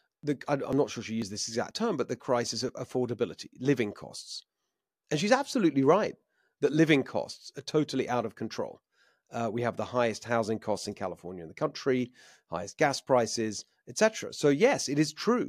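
From 0.23 s to 2.69 s the speech carries a regular run of small ticks, about seven of them, spaced 0.49 s apart and ending just before "affordability living costs". These are periodic USB or driver dropouts: at a fixed interval something stalls the audio path, and roughly 10 ms of signal is skipped outright rather than filled, so the waveform jumps across each gap and clicks wherever speech is present.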